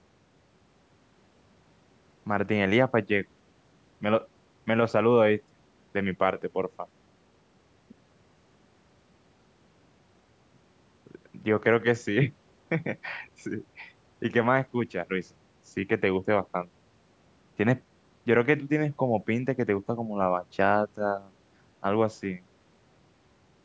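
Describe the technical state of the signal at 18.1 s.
At 18.1 s the speech signal is intact, with no fault present at that moment.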